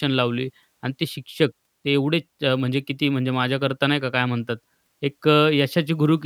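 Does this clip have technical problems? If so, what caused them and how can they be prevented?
Yes. A resampler restarted on every block runs from 2.04 s to the end, producing a 50 Hz buzz under the speech. Each 20 ms block is converted in isolation, so its edges lack neighbouring samples and every boundary leaves a small error. This fits a 44.1 kHz to 48 kHz conversion. To prevent it, use a streaming resampler that carries its filter state across blocks.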